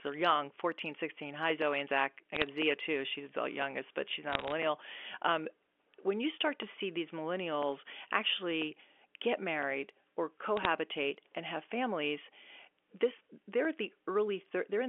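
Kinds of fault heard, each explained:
Bit errors on a digital phone line: Single bits flip in the 8-bit G.711 samples, and each flip corrupts one sample. Flips on the sign or high bits give sharp ticks. Short bursts of crackle ride over the speech at 2.35–2.47 s, 4.32–4.52 s and 10.57–10.65 s. The error rate is a few bits per thousand.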